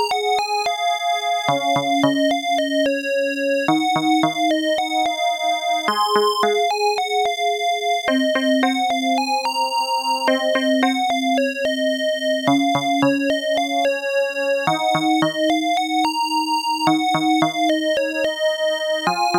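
Nothing stood out as a technical problem on listening to this audio.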